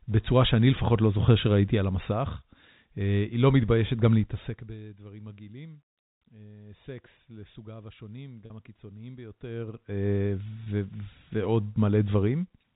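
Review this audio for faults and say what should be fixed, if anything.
Zipper noise from 4.16 to 4.75 s: a roughly 20 dB level drop is applied in coarse unsmoothed steps, around 300 per second, so each step ticks. Ramp gain per sample to prevent it.

Packet loss with pitch repetition at 8.46 to 8.50 s (40 ms lost) and 10.65 s (20 ms): the receiver repeats the last pitch period, giving a brief held buzz. Add jitter buffering or redundancy.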